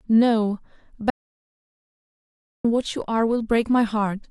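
An audio dropout to silence runs from 1.10 s to 2.65 s in this speech clip, removing about 1.54 s of the recording. The speech cuts off abruptly mid-flow and resumes just as suddenly, and the gap between is silent with no room tone or background at all. That points to the input signal being lost, likely through a disconnected device, a failed link or a stray mute, while recording carried on writing silence, so whatever was said in that stretch is gone.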